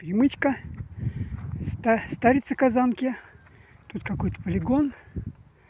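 No technical faults can be heard anywhere in the audio.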